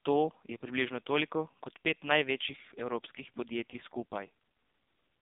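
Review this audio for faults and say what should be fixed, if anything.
AMR narrowband mobile codec damage runs through the whole clip: nothing passes above 3.7 kHz, the band sits at roughly 150 Hz to 3.7 kHz, and the speech has a buzzy, synthetic quality. That fits a low mode near 5.9 kbps, where sparse pulses drive the vocal-tract model in each 5 ms. To prevent it, capture or transfer the speech over a wideband path, or use a higher AMR mode if narrowband is unavoidable.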